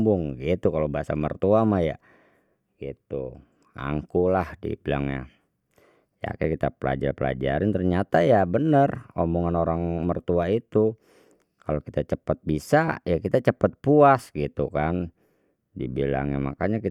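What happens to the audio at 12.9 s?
At 12.88 s, roughly 10 ms of lost LE Audio frames (consistent with one frame) are concealed by the decoder's sign-randomised repeat of the previous spectrum, heard as a brief noisy smear rather than a silent gap.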